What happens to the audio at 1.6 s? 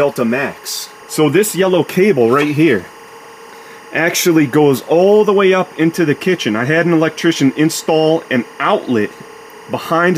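At 1.6 s a steady, chirping warble sits behind the sound, roughly 25 dB below it and flickering between two pitches near 1 kHz and 2 kHz. It isn't a momentary event: the same timecode bleed runs through the whole clip. Linear timecode on a neighbouring track or cable is leaking into the audio path. That code is a square wave whose bit transitions flip between those two pitches, and its repeating rhythm fits 24-frame-per-second code.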